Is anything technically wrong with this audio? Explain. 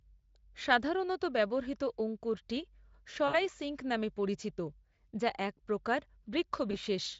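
Yes. There's VoIP packet loss concealed by the speech codec, at 3.27 to 3.48 s, just before "সিঙ্ক নামে পরিচিত", and again at 6.71 to 6.77 s. The first gap sounds like about 60 ms missing, which fits three 20 ms frames; the second sounds like a single 20 ms frame. The speech decoder fills the holes by repeating its last pitch and filter at falling gain, so you hear a buzzy or noisy, fading smear that stays weak for a moment after the audio returns.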